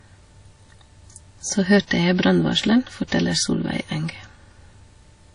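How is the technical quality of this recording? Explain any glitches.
The speech is clearly degraded. Throughout, it sounds like low-bitrate audio saved at a high bitrate. Nothing exists above 10.1 kHz, likely from an earlier low-bitrate encode, perhaps around 32 kbit/s. The later high-bitrate MP3 cannot restore it, so it sounds dull.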